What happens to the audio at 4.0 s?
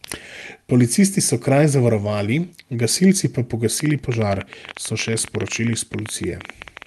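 At 4.0 s the audio is inside a train of clicks that begins at 3.80 s, just after "kraj zavarovali gasilci pa", and runs to the end. About 14 similar pulses per second arrive at uneven spacing, peaking roughly 10 dB above the signal, likely from interference or a faulty connection. Unlike random crackle, the clicks share one shape and keep ticking through the pauses.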